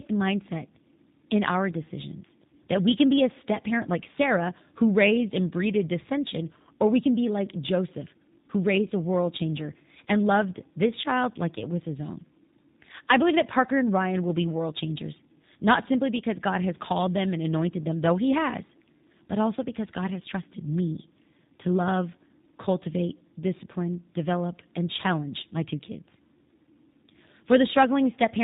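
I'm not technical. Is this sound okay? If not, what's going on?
No. The problem is tandem speech coding, and it runs through the whole clip. The call passed through more than one phone link, and each one squeezed the speech with its own codec. Two speech codecs ran one after the other, the last being G.729A. Each re-squeezed what the last had already spoiled. So the speech sounds rougher and noisier, and also muffled and warbly. Nothing above about 3.8 kHz comes through.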